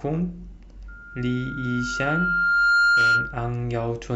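From 0.88 s to 3.43 s the speech is overtaken by loudspeaker feedback squeal. A microphone is picking up the loudspeaker it drives, and around 1.4 kHz the loop gain has risen above unity, so that frequency regenerates on each pass. A single steady tone swells over roughly two seconds until it sits about 10 dB above the speech, then stops at 3.43 s.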